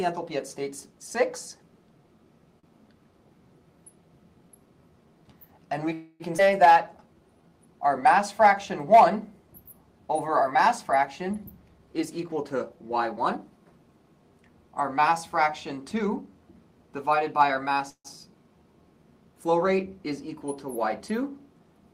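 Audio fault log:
2.59 to 2.66 s, short stall from a late packet: the sound at that point is held for an extra 39 ms with a slight buzz or dip, then continues from exactly where it stopped. The jitter buffer ran dry while waiting for one packet and stretched the last sound until the packet arrived. Nothing is lost. Unlike a freeze, the hold is too brief to fade or drop to silence, so it comes across as a slight drag.
5.93 to 6.23 s and 17.90 to 18.08 s, call audio freeze: the last sound is carried on as a fading buzz or hiss for 266 ms in the first case and 150 ms in the second. The second one thins to about 70 ms of silence before the audio returns. The likely cause is packets held up in transit, which emptied the buffer. Playback then resumes at the same point, so time is added and nothing is skipped. That separates a freeze from a skip ahead.
6.38 to 6.41 s, skip ahead: about 100 ms of audio is gone, and the two sides are joined by a 5 ms splice, so there is a jump with almost no gap. 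Later audio was already queued when the stretch was dropped. The result is the opposite of a stall or freeze: content disappears and no time is added, so the sound seems to lurch forward.
6.73 to 7.50 s, jitter buffer slow-down: the audio runs at about 87 % speed with unchanged pitch, and about 110 ms is added, which gives drawn-out sounds. To rebuild its reserve, the buffer repeated single pitch periods or slices of pauses many times in a row. Because the stretching is spread out, the result is a slowed passage rather than one frozen moment.
11.60 to 13.51 s and 15.91 to 16.27 s, jitter buffer speed-up: playback runs at about 112 % and 113 % speed with unchanged pitch. Roughly 200 ms is removed in the first span and roughly 50 ms in the second, so both sound hurried. The buffer was holding more than its target and cut many tiny pitch-period pieces to reduce the delay. The trimming is spread thinly across each span, which is why it sounds rushed without any audible jump, unlike a skip ahead.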